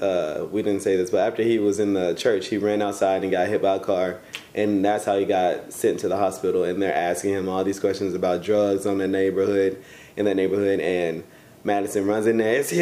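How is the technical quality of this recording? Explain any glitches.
The technical quality of the recording is sound, with no glitches to explain.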